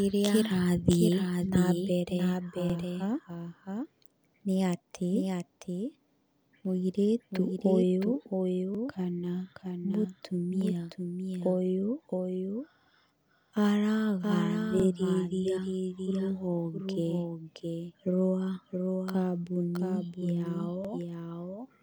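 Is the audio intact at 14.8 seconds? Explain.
No. At 14.80 s there is a brief stutter: a 50 ms slice of the speech plays twice, so the sound seems to jump back and repeat for an instant before carrying on, ending around 14.85 s. These are overlapping chunks. The audio was handled in blocks, and this block began before the previous one had finished, so the overlap is heard twice at the join. The join's position fits blocks of about 6 s.

Under that stutter, as through the whole clip, a doubled audio track is audible. A second, full-band copy of the speech trails the original by roughly 0.7 s at a level a few decibels lower, about 5 dB down. It carries no reverberant tail or room colour, so it sounds like a flat, detached repeat rather than an echo. The likely cause is the same signal reaching the mix twice, once through a slower path.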